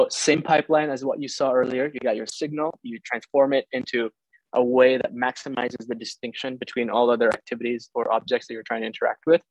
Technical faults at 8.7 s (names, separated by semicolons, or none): none